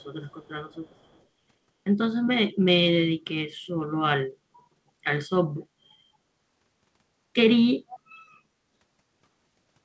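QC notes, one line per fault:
0.00–0.06, 0.26–0.49, 0.70–1.23 and 7.88–7.99 s, echo leak: a far-end echo canceller likely let loudspeaker pickup through, so a delayed copy of the speech trails it by 226 ms, about 35–40 dB below the speech early on but much stronger at 7.88 s.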